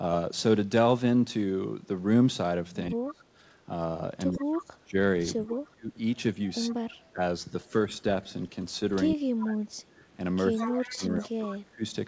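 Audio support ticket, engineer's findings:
Speech suppressed in double talk, likely from the echo canceller misjudging overlap as echo and attenuating the near talker. Voice dips up to about 35 dB and breaks into pieces at 2.9–3.23 s, 4.38–5.96 s, 6.68–8.04 s and 9.12–11.83 s. Brief at first, then roughly a second of loss in the second span and about two seconds in the last.

Echo leak, likely residual loudspeaker pickup passing the canceller. A delayed copy of the voice trails by 115 ms. Faint scraps at 3.08–3.13 s and 4.32–4.45 s, around 20–25 dB down. A longer, clearer stretch at 10.59–11.29 s is only about 10 dB below speech. Nothing is heard above 8 kHz, which fits a 64 kbps G.722 call path.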